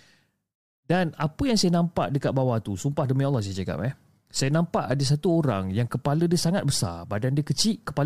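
No technical faults can be heard anywhere in the speech.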